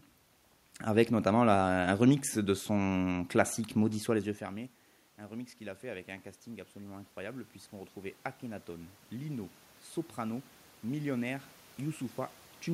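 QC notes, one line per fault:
5.18–9.58 s, automatic gain rising: the input dropped about 19 dB, so the gain control lifted gain about 7 dB gradually, swelling voice and room noise together.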